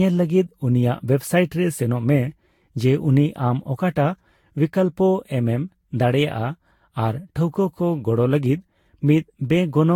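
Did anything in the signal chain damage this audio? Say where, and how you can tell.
Yes, at the codec stage. Generation loss runs through the whole clip: the speech sounds swirly and hollow, attacks smear, and there's nothing above 19 kHz. That's worse than a single pass would explain, so it was likely re-encoded about seven times with a lossy codec, each pass adding its own quantisation damage.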